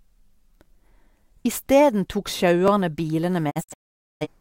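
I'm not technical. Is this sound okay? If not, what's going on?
No. Two problems are audible in this speech clip.

There are overlapping chunks. At 1.67, 2.68 and 3.69 s, a tiny 12 ms slice plays twice, causing a brief click or stutter once every second.

There is also a digital broadcast dropout. From 3.49 to 4.27 s, the sound fades out in several short holes, the longest about half a second, and that audio is lost.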